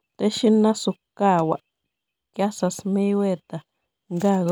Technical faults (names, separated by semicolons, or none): none